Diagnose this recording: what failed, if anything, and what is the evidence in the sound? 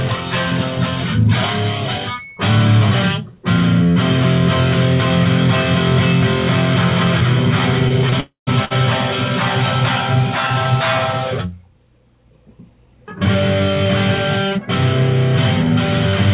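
Short stalls from late packets, at the network and jitter buffer. The sound is held too long at 7.88 to 7.92 s, 8.10 s and 8.65 to 8.73 s, by 24, 16 and 56 ms. Each packet arrived late, the buffer ran dry, and the receiver stretched the last sound. Nothing is missing.

Call audio freeze, in the same network and jitter buffer stage. From 8.20 to 8.49 s the sound is continued for 268 ms, including 130 ms of silence, then resumes where it stopped. The likely cause is delayed packets emptying the buffer. A gap is inserted, but nothing is lost.

Jitter buffer speed-up, in call processing. From 12.70 to 13.85 s the sound runs at 107% speed with unchanged pitch. The buffer had built up excess delay. The receiver cut about a tenth of a second in small pitch-period pieces to catch up. This runs over the G.711 A-law path, which has nothing above 4 kHz.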